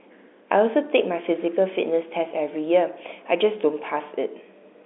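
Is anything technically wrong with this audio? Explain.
No, the speech arrives as ordinary G.711 telephone coding would carry it, confined to a line band of about 300 Hz to 3.6 kHz, with nothing in the signal departing from that normal telephone path.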